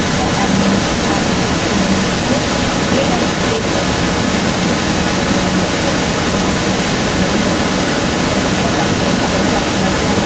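A speech recording with an echo leak running through the whole clip, from 0.0 to 10.3 s. A delayed copy of the speech trails it by about 0.23 s. It sits roughly 5 dB above the speech. The likely cause is a far-end loudspeaker whose echo canceller let its own playback back into the call.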